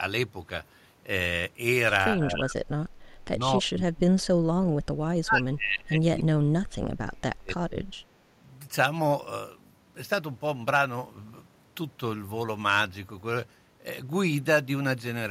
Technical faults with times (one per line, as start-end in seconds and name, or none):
2.16-4.84 speech suppressed in double talk
5.22-7.85 speech suppressed in double talk